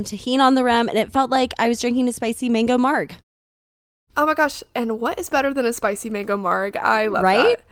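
No technical faults are audible anywhere in this speech clip.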